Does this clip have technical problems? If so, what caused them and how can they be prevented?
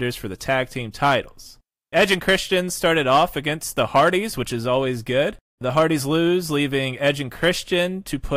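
Yes, the speech has hard clipping at 0.51–0.61, 1.02–1.15, 1.97–3.24, 3.79–4.08 (before "which is"), 5.77–5.83 and 7.07–7.80 s, overdriven by about 2–5 dB. Peaks are cut flat, which gives a harsh, crackling fuzz rather than the rounder thickening of soft saturation. To prevent it, lower the gain before the overloaded stage to leave enough headroom.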